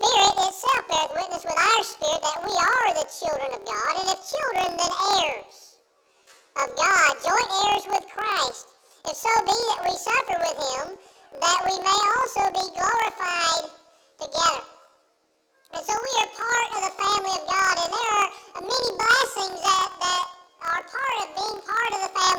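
Throughout the clip, planar audio is read as interleaved: each 26.12 ms block of all-left then all-right samples is taken as alternating pairs, so every block plays twice at double speed. The sound is shifted up an octave and carries a rough, robotic buzz at 38.3 Hz, the block rate.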